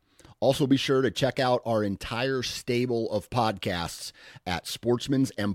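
Speech recording with no audible technical faults.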